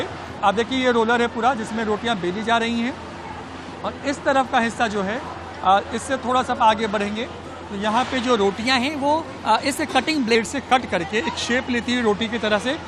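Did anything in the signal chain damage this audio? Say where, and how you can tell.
Yes. From 8.66 to 10.35 s the sound suddenly runs fast and sits higher, about 1.09 times normal speed and raised by roughly 1.5 semitones, then drops back to its proper pace. That is a wrong sample rate at the playback or converter stage. The samples were clocked out faster than they were captured, with no resampling, so tempo and pitch rose together by the same ratio. That ratio fits 44.1 kHz material played at 48 kHz.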